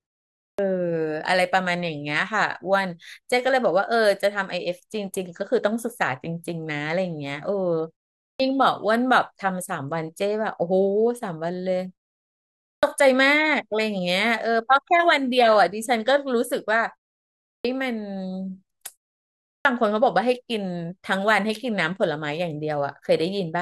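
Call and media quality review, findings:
Clipped start after a pause: speech onsets swallowed at 0.43, 8.25, 12.66, 17.48 and 19.48 s, each losing 150 to 170 ms after pauses of 0.36 to 0.76 s. Probable component: output device sleeping during silence, waking late. Words jump in without their first sounds. Unlike muted pauses, where only the background drops out between phrases and no speech goes missing, here the opening of the speech itself is lost.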